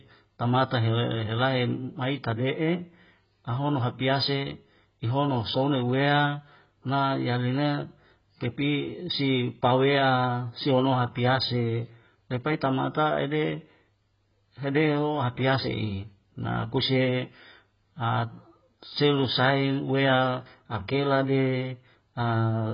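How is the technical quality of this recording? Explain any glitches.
Quality is poor. Throughout, the speech sounds dull and warbly, with nothing above 5.1 kHz. This is likely AAC compression at a very low bitrate, consistent with 12 kbps, discarding high bands and coarsely quantising the rest.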